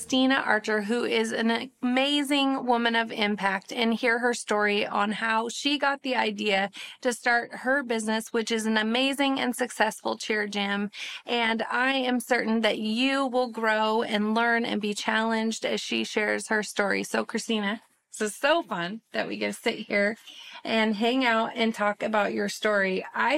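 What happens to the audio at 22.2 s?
Nothing goes wrong at 22.2 s; the audio plays through that moment intact, with no dropout, click, distortion or other fault.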